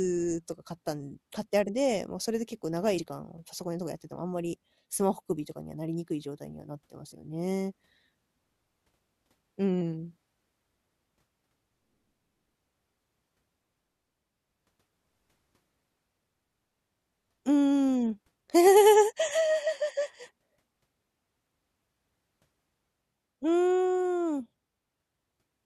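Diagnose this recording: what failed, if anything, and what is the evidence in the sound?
Compressed frames skipped, at the codec stage: the speech jumps ahead at 1.67 s, 2.97–2.99 s and 7.11–7.14 s, losing roughly 100, 70 and 50 ms. Whole frames went undecoded, so the audio jumps ahead by the length of the frames left out.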